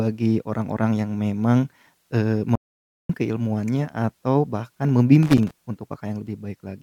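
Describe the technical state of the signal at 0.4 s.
At 0.4 s the speech signal is intact, with no audible fault at that moment.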